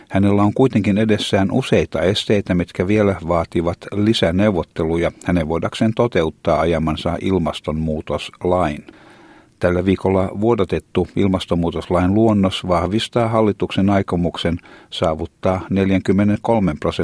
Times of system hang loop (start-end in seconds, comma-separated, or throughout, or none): none